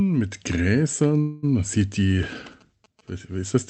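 A speech clip carried over a call path whose coding caps the band at 8 kHz. A call audio freeze runs from 1.21 to 1.45 s, just before "man sieht die": the last sound is stretched into a fading buzz or hiss for about 0.21 s, likely from packets arriving late and draining the jitter buffer. Nothing is lost, and the talk resumes a little later. On a spectrogram it shows as a smeared, decaying band, not a clean gap. GSM signalling bursts follow from 2.37 to 3.10 s, right after "man sieht die". They are a galloping dit-dit-dit of short buzzes at about 217 Hz, sitting about 30 dB below the speech, and would appear as evenly spaced vertical striations and a 217 Hz harmonic comb.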